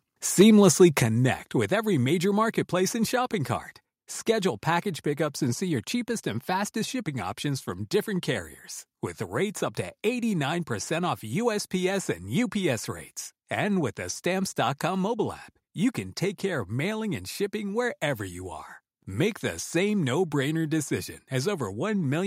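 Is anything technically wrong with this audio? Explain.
Yes, there are two kinds of fault, and both come early in the speech.

Microphone overload, at 0.40 to 0.43 s and again at 0.81 to 0.83 s: the input volume was likely set too high, so the loudest peaks ran past the converter's ceiling, by about 3 dB the first time and about 1 dB the second. The tops of those waveforms are sliced flat, roughly a tenth of the samples in the first burst and a few percent in the second, giving those syllables a brief harsh, crackly edge.

Microphone volume stepped down, at 1.02 s and at 4.8 s: the call software likely reacted to those overloaded peaks by cutting the device's input volume in single jumps, by about 6 dB just before "with every major marketplace" and then by a further 1 dB before "pickups and see your". The first step is a sudden drop in loudness of voice and background together. The second is a much slighter dip.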